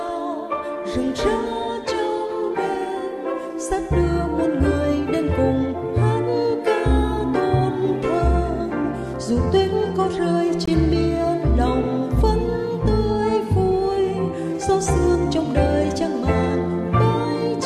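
Two separately encoded pieces of audio were joined without trimming the encoder's start-up delay or the padding on the last frame, and that leftover silence shows up as a gap at a join of encoded pieces. At 10.66 to 10.68 s the continuous sound drops out for about 21 ms. The edges of the cut and the return are smeared by the codec, and the sound then resumes exactly where it stopped, with nothing lost or repeated.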